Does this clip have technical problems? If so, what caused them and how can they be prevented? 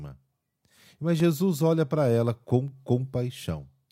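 Yes. The speech has two blocks of digital silence. One falls at 1.2 s, just before "olha para ela com", and lasts about 2 ms. The other falls at 2.68 s, just after "olha para ela com", and lasts about 0.5 ms. In each, the sound cuts out and back with no fade. Both are heard as ticks or dips. Keeping the output buffer filled on time, with a larger buffer if needed, prevents such dropouts.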